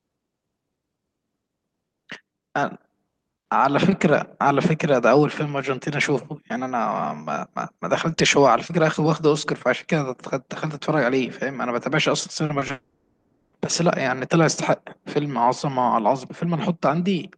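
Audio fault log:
12.45 to 12.71 s, short concealed packet loss: three brief gaps, about 40 ms at 12.45 s, then 20 ms each at 12.59 s and 12.67 s. Each is patched by extending the preceding sound and blending back, heard as quick smears or wobbles. The spectrogram shows narrow smudged bands. The waveform shows repeated cycles where detail should change.
12.71 to 13.55 s, long network dropout: right after the last short gap, the sound stretches into a continued buzz or hiss that fades over about 0.8 s before real audio resumes, with that section lost. This is likely a stall in arriving packets. The spectrogram shows smeared, decaying energy below the call path's 12 kHz ceiling. The waveform shows a shrinking repetitive envelope.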